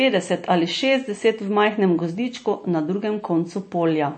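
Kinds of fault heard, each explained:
MP3 compression: Nothing comes through above about 8.4 kHz for the whole clip, and the speech has a plainly audible watery, swirly quality, with the s sounds turning metallic and chirpy. That's likely heavy MP3 encoding, at a rate that fits roughly 32 kbps. Short of bits, the encoder chops off the treble at a fixed point and drops quieter frequency lines, which flicker in and out from frame to frame and leave that burbling texture.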